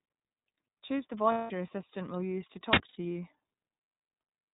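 A speech recording carried through the iLBC codec throughout, with plainly audible coding damage: nothing above 4 kHz survives, and the voice has a rough, slightly synthetic texture that fits the 13.33 kbps mode with 30 ms frames, each frame's excitation coded independently of the last. Two stretches of lost iLBC frames interrupt it. From 1.32 to 1.51 s, just before "your assistant will use", about 180 ms is replaced by a held, buzzy vowel-like tone as the decoder repeats the last pitch cycle mixed with noise, consistent with six missing frames. A shorter 90 ms gap at 2.88 to 2.97 s does the same. Because the frames stand alone, the voice recovers almost immediately after each gap.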